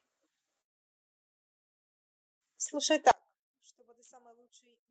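A speech recording passed through a call path whose coding caps the top end near 8 kHz, consistent with Opus at around 32 kbps. From 0.61 s to 2.47 s there is a long network dropout: roughly 1.8 s of audio never arrives, and the gap plays back almost entirely as silence before the speech resumes further on, with the missing stretch simply gone rather than delayed. That pattern likely points to lost packets that the receiver could not conceal beyond the first instant. From 3.11 s to the end of the clip, one channel is inverted. When the stereo is summed to mono, the common centred content cancels and the level falls by about 32 dB, leaving only a faint residue of the difference between channels. A polarity flip on one leg of the stereo signal is the likely cause.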